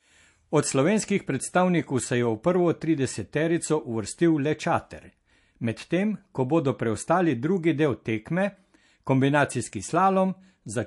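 Throughout the speech, the sound is plainly watery and swirly, with smeared attacks and metallic chirps on s sounds, the marks of likely MP3 compression at a bitrate that fits roughly 48 kbps. A spectrogram shows a hard ceiling at 11.3 kHz and weak components flickering between frames.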